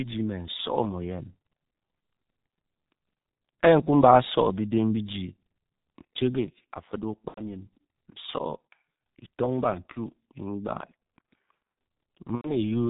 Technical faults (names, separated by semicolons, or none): G.723.1 codec; VoIP packet loss concealed by the speech codec